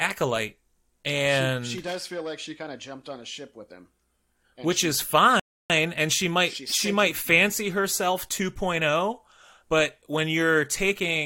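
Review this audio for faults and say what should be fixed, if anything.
A rebuffering stall interrupts the speech from 5.40 to 5.70 s, right after "which she is", and it resumes with "and she might she". The player ran dry of downloaded audio, fell silent, then continued exactly where it stopped, adding about 0.3 s. What separates it from a dropout is that nothing is skipped: the phrase picks up intact rather than jumping ahead. A larger playback buffer or adaptive bitrate would prevent it.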